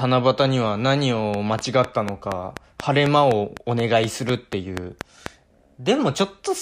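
Speech. A regular train of clicks runs from 1.34 to 5.27 s, 4.1 per second, about 15 dB above the speech. Nearby interference is the likely cause.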